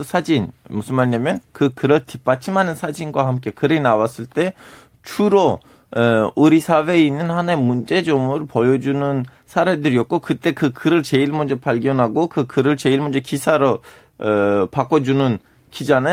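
No technical faults are audible.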